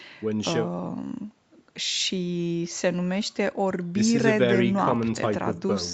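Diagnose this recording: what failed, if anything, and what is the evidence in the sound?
Nothing failed: the speech has gone through normal call microphone processing, which trims the lowest bass, and a WebRTC call path whose codec leaves nothing above 8 kHz, a band limit that points to an Opus wideband setting and is expected on this route rather than a defect.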